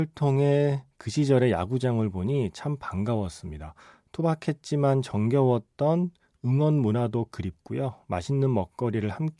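No technical faults can be heard anywhere in the speech. Nothing in the recording calls for a timestamp or an account of something going wrong.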